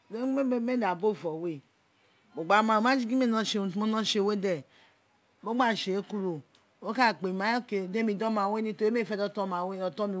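No technical faults can be heard in this speech.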